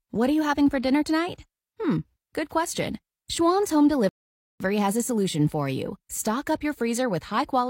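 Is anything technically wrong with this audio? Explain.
Yes. The speech has a rebuffering stall from 4.09 to 4.60 s. The player used up its downloaded audio and had to wait for more data. The sound drops to silence for about half a second, roughly 513 ms. It then picks up exactly where it stopped, with "has a solution for". No speech is skipped or repeated. The pause only adds time and breaks the natural flow.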